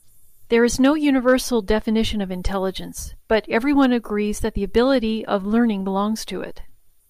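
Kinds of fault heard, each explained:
Hard clipping: the speech briefly exceeds what a stage in the chain can pass, so peaks are sliced flat, adding high harmonics heard as crackle. It occurs from 1.28 to 1.34 s with about 1 dB of overdrive, and again at 4.77 s with about 2 dB.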